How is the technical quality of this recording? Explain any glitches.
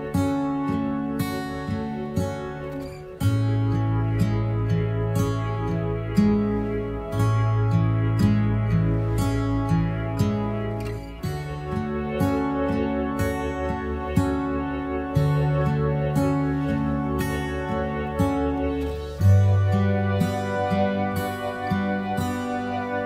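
The technical quality of this recording is sound, with no glitches to explain.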